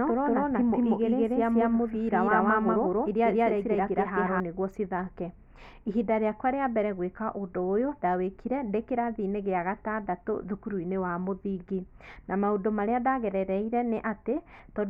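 Speech, with a doubled audio track already under way when the clip opens and running to 4.4 s: a second, full-band copy trails the original by about a fifth of a second at roughly the same level, then cuts off abruptly. Unlike an echo or reverberation, it gives one repeat with no decay and no room colouring. The likely cause is the signal being captured twice, once through a slower path.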